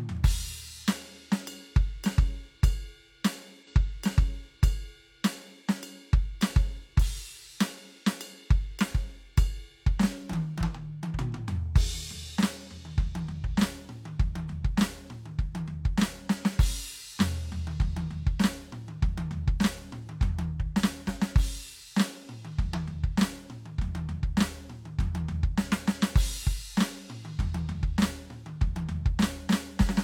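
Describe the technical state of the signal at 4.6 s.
At 4.6 s the music is inside a stream segment repeated fault running from 3.63 to 5.62 s. The player has fetched or queued the same chunk of the stream twice, so after a small blip at the jump back, about 2.0 s of music that has already played is heard again. The repeat lengthens the programme by that amount, and the music then carries on from where the duplicated section ends.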